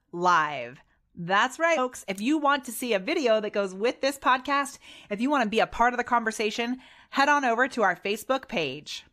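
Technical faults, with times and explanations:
1.77 s, damaged data in a compressed stream: a brief glitch cuts into the speech where corrupted bytes make the decoder misread a frame and hunt for the next header.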